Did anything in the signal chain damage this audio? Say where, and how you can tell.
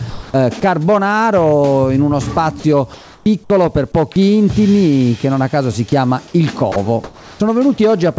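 Yes. The call processing stage shows gain pumping. The gain swings by around 5 dB. Loud and soft parts sit too close together. The likely cause is input gain set too high, feeding a fast limiter.

At the call processing stage, the receiver played comfort noise in place of the background at 0.10–0.34 s, 2.94–3.26 s and 7.04–7.40 s. The real background gives way to flat, featureless hiss, about 3 dB quieter in the first two gaps and about 1 dB in the last. This is likely discontinuous transmission.

Sound was dropped by the voice detector at 0.60 s and again at 6.72–6.76 s. Brief stretches of sound vanish into steady noise, losing about 10 ms and 40 ms. The detector likely mistook quiet sound for background and stopped sending.

There is an onset clipped by the voice detector at 3.24–3.26 s, 3.48–3.50 s and 7.37–7.40 s. Sounds begin abruptly, missing their soft attack, with 20 to 30 ms cut. 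The detector was likely slow to reopen, so comfort noise covered the start.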